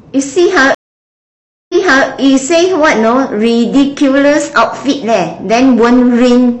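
At 0.75 s there's a stream reconnect: the connection dropped, leaving about 0.95 s of silence, then a fresh decoder picked up mid-stream. The speech resumes by 2.06 s but jumps back about 0.37 s, repeating a moment, and it eases in muted.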